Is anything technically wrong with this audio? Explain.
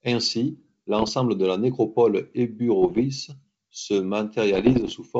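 Yes. There are bit errors on an ADPCM link, in three bursts: 0.99 to 1.13 s, ending just before "de la nécropole"; 2.82 to 3.01 s, just after "de la nécropole"; and 4.53 to 4.93 s. Flipped bits, roughly one in two hundred in the first burst and one in a hundred in the other two, throw off the decoder's step size and predictor. Each error rings on briefly as pops, rough bursts and short level jumps. The underlying wideband G.722 sound stays clear up to 7 kHz.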